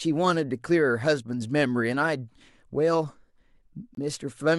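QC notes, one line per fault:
3.95–3.98 s, Bluetooth dropout. The speech cuts out for about 30 ms, leaving a short silent hole. Sound resumes further on, as if it had kept playing. The gap fits one lost frame of about 23 ms, likely from packets arriving too late.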